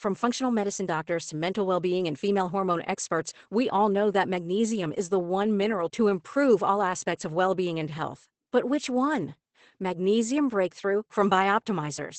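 Throughout the clip, Opus voice compression is plainly audible. Nothing remains above 8.5 kHz, consistent with the SILK coder in wideband mode, and coarse excitation coding leaves the speech muffled, hoarse and faintly robotic, which fits a bitrate around 12 kbps.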